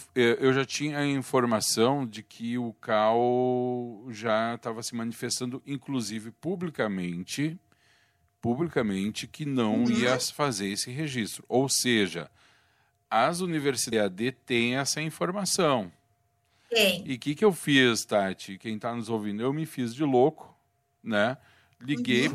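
At 13.89 s the speech is broken by damaged data in a compressed stream. It lasts until 13.93 s, about 40 ms, just before "têm essa informação". A short stretch of the encoded bytes is wrong there. The decoder cannot read those frames properly. It loses its place in the stream and hunts for the next valid frame header before normal decoding resumes. The result is a brief chirp, click or short hole that does not belong to the speech around it.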